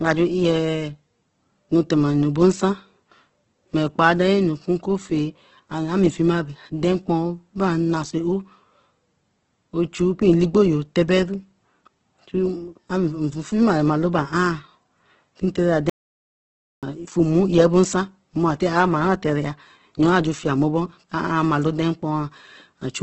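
Opus compression runs through the whole speech clip, from start to finish. Nothing is left above about 8.2 kHz, so the top of the spectrum is cut away and sibilants lose their edge. The speech takes on a rough, grainy texture rather than a swirling one. That fits Opus in its music mode, likely at a very low rate of around 12 kbps, where the encoder fills starved bands with folded or noise-like content instead of leaving gaps.

An audio dropout to silence runs from 15.90 s to 16.83 s, about 0.93 s of silence. The speech stops abruptly mid-flow and resumes just as suddenly. The background and room tone vanish during the gap, which marks it as a dropout rather than a pause. The likely cause is a brief loss of the input signal while recording continued, and whatever was spoken in that stretch is gone.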